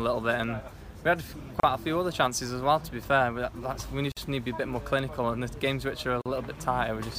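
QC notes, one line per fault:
1.60–1.63 s, 4.12–4.17 s and 6.22–6.26 s: gap at a join of encoded pieces. The sound drops out for about 34 ms, 49 ms and 42 ms, then picks up right where it left off. It looks like the file was encoded in separate chunks and stuck together untrimmed, so each join still carries the encoder's start-up delay and last-frame padding as dead air. The edges are softened by the codec.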